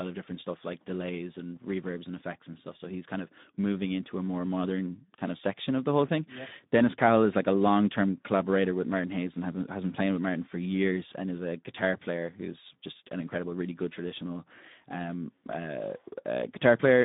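Throughout, the speech has passed through the Speex codec at a low setting, which fits roughly 11 kbps and a band of 150 Hz to 3.7 kHz. Too few bits reach the excitation, so the voice sounds plainly noisy and hoarse, and narrow.

At 15.53 s, just after "really good traditional um", a repeated buffer occurs: fresh audio arrived late, so a tiny piece, which fits a 64-sample buffer of about 1.45 ms, played four times with hard joins. It is heard as a brief click or buzz, with almost nothing lost.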